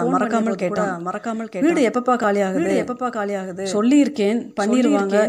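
All the way through, the speech has a doubled audio track: a flat copy about a second behind, a few dB quieter, likely from a second capture path.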